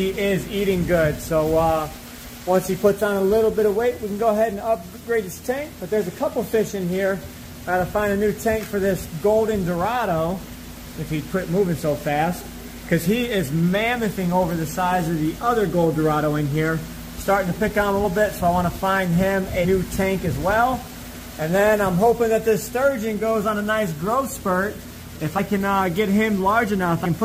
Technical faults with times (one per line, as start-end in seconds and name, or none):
10.93 compressed frames skipped
18.03 compressed frames skipped
19.64 compressed frames skipped
25.37-25.39 compressed frames skipped
27.04 compressed frames skipped